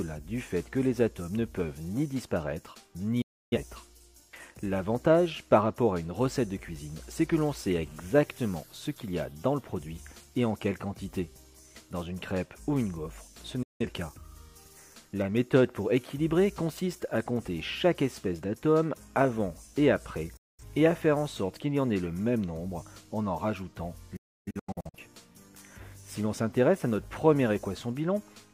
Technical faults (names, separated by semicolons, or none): digital broadcast dropout